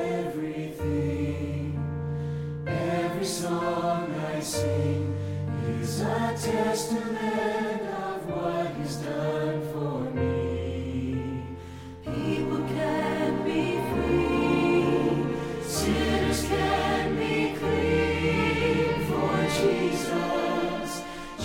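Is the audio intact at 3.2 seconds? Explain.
Yes, the audio at 3.2 seconds is intact, with no dropout, click, distortion or other fault to be heard at that moment.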